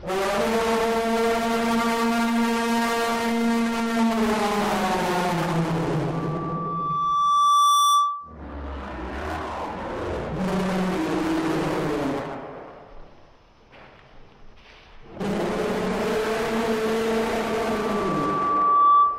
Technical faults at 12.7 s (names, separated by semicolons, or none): none